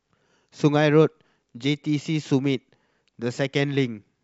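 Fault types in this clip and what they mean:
Nothing here to flag; the recording gives no sign of any technical fault.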